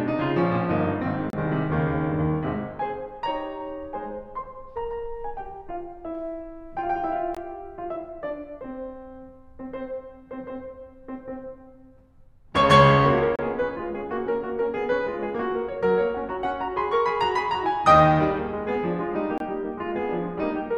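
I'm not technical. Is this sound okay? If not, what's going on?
No. The music briefly cuts to silence four times, at 1.30 to 1.33, 7.35 to 7.37, 13.36 to 13.39 and 19.38 to 19.40 seconds, each hole lasting 20 to 30 milliseconds. This is a gap between stream segments. The audio arrives in chunks about 6 seconds long that don't quite line up, so the player fills the tiny space with silence. Unlike a dropout, no music is lost; it picks up exactly where it stopped, at steady intervals.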